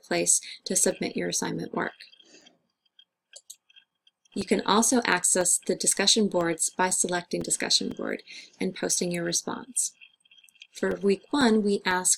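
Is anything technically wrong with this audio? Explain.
Yes. From 0.41 s to 11.92 s, regular ticks sound every 0.5 s, about twenty in all, audible only where there is signal. These are periodic USB or driver dropouts: something stalls the audio path at a fixed interval, and each stall replaces a few milliseconds of audio with silence.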